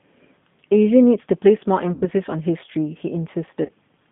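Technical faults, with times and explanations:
Throughout, G.729 codec: the sound is confined to about 150 Hz to 3.6 kHz and has a plainly rough, synthetic edge, which fits an 8 kbit/s G.729A coder rebuilding speech from a vocal-tract filter, pitch predictor and a few pulses per frame.
1.93–2.07 s and 3.65–3.70 s, VoIP packet loss concealed by the speech codec: the decoder stretches its last pitch and filter into a buzzy tone or coloured noise that fades, about 90 ms then 30 ms, fitting three and one lost packets, before the sound recovers.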